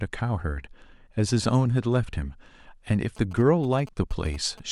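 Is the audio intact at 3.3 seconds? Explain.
No. From 3.17 to 4.60 s, GSM signalling bursts from a nearby 2G phone are rectified by the audio circuitry, adding a galloping dit-dit-dit of short 217 Hz buzzes, roughly 20 dB below the speech.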